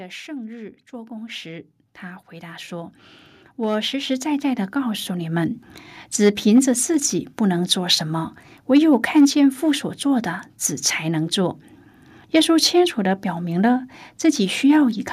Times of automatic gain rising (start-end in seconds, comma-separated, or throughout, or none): 0.26-5.48